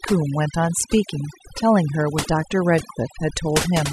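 Speech recording put through overdone noise removal that runs the whole way through, with the reducer pushed far past a sensible setting for the noise it was fighting. Any frequency band that drifts close to its noise estimate gets cut hard or muted outright, and the softer parts of the voice are caught along with the noise. The gaps collapse into an unnatural near-silence flecked with twinkling specks.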